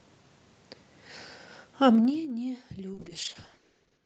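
Zipper noise runs from 1.88 to 2.30 s. The level falls by about 15 dB in unsmoothed 2 dB jumps, roughly twenty a second, and each jump leaves a small click. Together they make a fast ticking that rides on the speech as it drops.

A call bitrate drop begins at 2.95 s and lasts to the end, at its lowest for about 1.04 s. The sound points to the encoder falling from roughly 48 kbps to 8 kbps. Coarser coding makes it rough and watery, and the top end is cut from 20 kHz to 8 kHz, so it sounds muffled.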